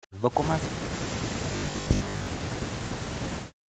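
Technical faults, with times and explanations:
0.07–0.15 s and 0.69 s to the end, speech suppressed in double talk: the voice sinks sharply, by as much as about 40 dB at its deepest, first in a brief dip of under a tenth of a second and then through the rest of the clip. This is likely an echo canceller hearing both sides at once, failing to tell the near talker from loudspeaker echo, and damping everything.
1.53–2.27 s, robotic sound from repeated short buffers: within the suppressed stretch the voice turns into a stiff, metallic drone locked at 50 Hz, still loosely tracing the speech. The likely cause is audio arriving too rarely, so the receiver loops the last short slice, which fits a 20 ms buffer, while most of the real audio in this span is skipped.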